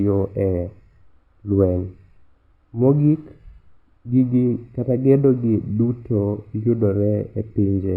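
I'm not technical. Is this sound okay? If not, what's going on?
No. Throughout, there is imaging from linear upsampling, which fits a 12 kHz original stretched crudely. The highs are dulled, and faint mirror copies between 6 and 12 kHz add a slight metallic shimmer to hissy sounds.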